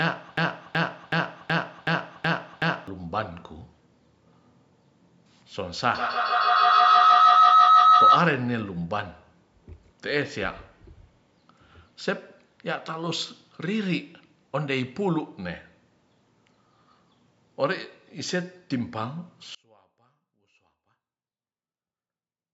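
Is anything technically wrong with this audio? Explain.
Yes, three faults are audible.

From the very start to 2.88 s, a broken-record loop, already under way, repeats an identical 0.37 s fragment seven times, likely from a stalled stream resending its last piece. Unlike echo, the repeats never fade.

From 5.95 to 8.32 s, a feedback howl builds to about 11 dB above the speech around 1.5 kHz, pulsing roughly every 150 ms as the microphone-to-loudspeaker loop gains level. It grows and narrows to a tone rather than repeating content.

From 19.55 s to the end, the level drops by about 33 dB, likely one channel inverted cancelling the centred speech when summed to mono. A faint residue remains, so it is not a dropout.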